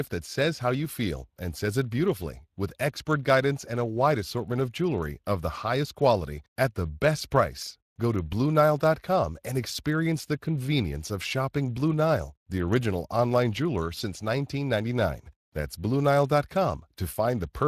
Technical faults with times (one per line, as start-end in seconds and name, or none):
0.00-17.68 Speex codec